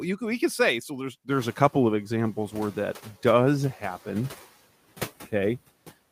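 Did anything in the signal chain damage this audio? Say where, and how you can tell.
Yes. The noise suppressor catching up, in call processing: the room noise rises about 18 dB around one and a half seconds and its noise estimate lags, so from 1.3 to 1.72 s the noise passes under-reduced, then sinks about 5 dB over 420 ms before "of examples where that".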